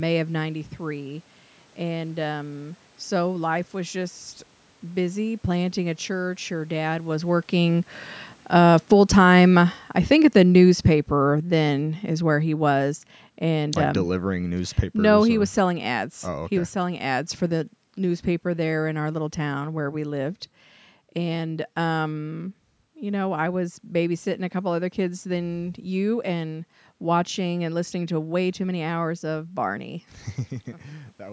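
From 7.2 s to 22.08 s there is automatic gain falling. The gain control judged the input too loud or its background noise too strong and lowered its gain steadily by about 14 dB, so voice and room noise sink together. The waveform envelope tapers evenly, and the spectrogram dims uniformly across every band.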